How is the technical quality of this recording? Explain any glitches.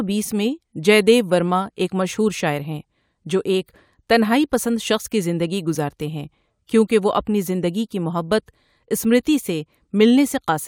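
The technical quality of this recording holds up, with no glitches to explain.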